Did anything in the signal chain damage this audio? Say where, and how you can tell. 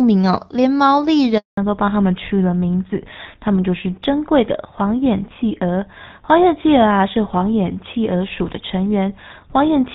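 Yes, in the network stage first. A handover gap runs from 1.37 to 1.57 s: the speech fades out within a few tens of milliseconds and 200 ms of silence follows before sound resumes. No speech frames arrived while the call was being moved between networks, so the decoder had nothing to play. Whatever was said in that window is gone, and no retransmission could recover it.

The damage continues in the codec stage as a fallback to narrowband, starting at 1.57 s and lasting to the end of the clip. Up to the handover the audio has the light coding texture of the AMR wideband (HD Voice) codec, which fits roughly 12.65 kbit/s. Afterwards nothing above 4 kHz is present, and the speech sounds duller and rougher. This points to the call being renegotiated onto an older narrowband codec, which fits GSM full rate at 13 kbit/s.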